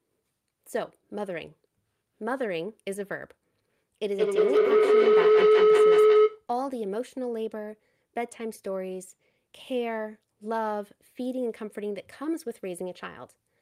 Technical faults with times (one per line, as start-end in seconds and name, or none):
4.03-6.50 feedback howl